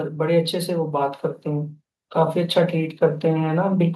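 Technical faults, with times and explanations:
0.18–3.95 s, automatic gain rising: from just after the start the level climbs steadily by about 6 dB, spread over nearly four seconds. The automatic gain control judged the input too quiet and kept nudging its gain upward, so the background noise floor swells in step with the speech. That shared rise tells it apart from a talker simply speaking louder or moving closer, where the voice would grow but the room noise would stay put.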